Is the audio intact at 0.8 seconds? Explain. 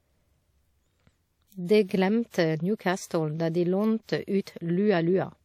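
No. At 0.8 seconds, as throughout the speech, the sound is ringing and washy, with a hiss that swells and fades with the signal and nothing above 19.8 kHz. The likely cause is WMA compression, whose long transform blocks smear quantisation noise, fitting a bitrate around 48 kbps.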